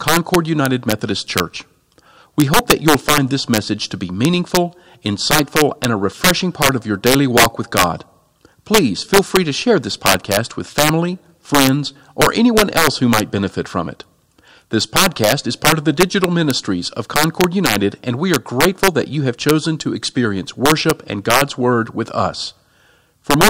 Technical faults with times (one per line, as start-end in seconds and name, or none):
0.00-23.50 integer overflow